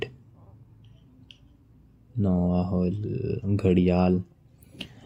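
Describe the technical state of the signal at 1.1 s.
At 1.1 s the speech signal is intact, with no audible dropout, distortion, clipping or other fault at that point.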